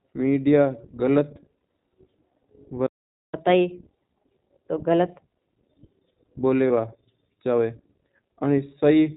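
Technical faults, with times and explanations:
Throughout: iLBC codec. The speech passes through a narrowband VoIP coder, and the coding damage is plainly audible. Nothing above 4 kHz survives, so the top of the sound is missing and it comes across as slightly rough and synthetic. The damage fits 20 ms frames at about 15.2 kbps. On a spectrogram there is a hard ceiling at 4 kHz with empty space above it, and the harmonics below it look somewhat smeared.
1.58–1.62 s and 6.68–6.71 s: lost iLBC frames. The first gap lasts 40 ms and the second 20 ms, which fits two dropped frames and then one. For each gap the decoder filled in by repeating the last pitch cycle mixed with noise, which sounds like a brief held, faintly buzzy vowel. Each frame decodes on its own, so the speech is clean again right after each gap. On a spectrogram each gap shows as a short, flat run of repeated harmonics with noise across it. 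The waveform shows a short stretch of near-identical periods.
3.34–5.24 s: catch-up at higher speed. After a stall, the player plays its backlog 1.25 times faster by resampling. Speed and pitch both go up, the pitch by roughly four semitones, and they drop back to normal at 5.24 s. On a spectrogram the harmonics move up and spread apart for that stretch, then fall back. In the waveform, the syllables over that span look squeezed closer together.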